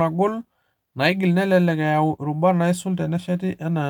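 Nothing stood out on listening to this speech recording.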